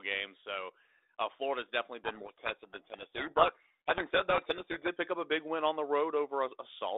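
Codec payload misread from 2.04 to 4.89 s: the decoder takes the G.726 code words with their bits in reversed order, burying the speech in harsh, grinding distortion over a narrow telephone band that fits 32 kbit/s.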